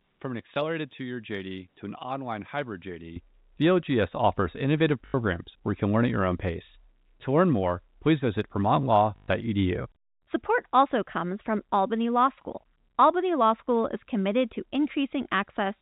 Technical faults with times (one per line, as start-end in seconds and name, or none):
0.00-3.16 input switched to a poorer device
0.54-0.56 packet loss with last packet repeated
5.06-5.14 packet loss with last packet repeated
9.16-9.28 packet loss with last packet repeated